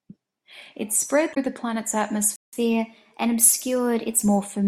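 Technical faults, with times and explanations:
1.31–1.37 s, damaged data in a compressed stream: corrupted bytes in the encoded speech make the decoder misread or drop frames and hunt for the next valid frame header. The result is a brief glitch of about 60 ms.
2.36–2.53 s, playback stall: the player most likely ran out of buffered data or had its thread blocked, so output stopped. The speech cuts to silence for about 0.17 s in mid-flow, then resumes.
2.53–4.23 s, catch-up at higher speed: to recover the time lost in the stall, the player resamples its backlog and plays it at 1.1 times normal speed. Speech runs quicker and sounds about 1.5 semitones higher until it settles back at 4.23 s.
3.59 s, damaged data in a compressed stream: a second short stretch of corrupt encoded data, about 14 ms long, again throws the decoder out of sync. It lands inside the sped-up section and is heard as a very brief glitch.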